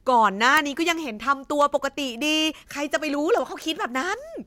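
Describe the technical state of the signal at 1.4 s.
At 1.4 s the speech carries word clock ticks. They run from 0.17 s to 4.42 s. The receiving device runs on its own clock, unlocked from the sender's. The two clocks differ by a few hundred parts per million. Each time they slip past each other, one sample is dropped or repeated. This produces a sharp tick of uneven strength about every 70 ms. There are around fifty ticks across that span.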